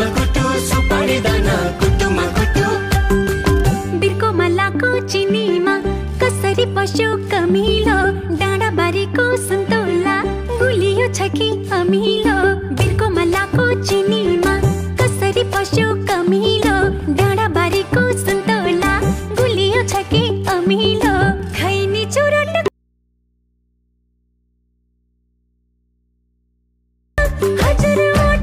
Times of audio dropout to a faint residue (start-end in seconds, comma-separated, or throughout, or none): 22.68-27.18